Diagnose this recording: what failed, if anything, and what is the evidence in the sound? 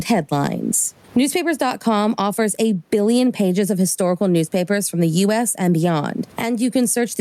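The failure is gain pumping, and it runs through the whole clip. The room noise sits about 44 dB under the speech, and the gain swings by around 15 dB. Loud and quiet syllables also come out squashed toward one level. The likely cause is input gain set far too high, with a fast limiter or compressor in the call processing clamping down on each peak and then releasing.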